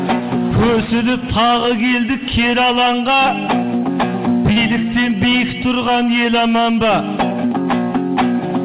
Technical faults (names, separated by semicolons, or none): short concealed packet loss